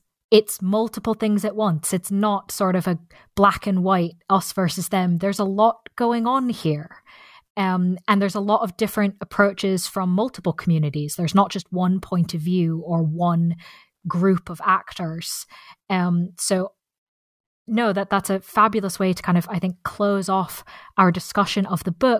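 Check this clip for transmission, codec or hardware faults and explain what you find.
Nothing here stands out as a transmission, codec or hardware problem, so this speech recording needs no further attention on that front.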